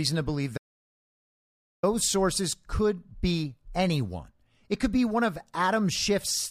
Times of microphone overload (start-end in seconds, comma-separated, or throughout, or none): none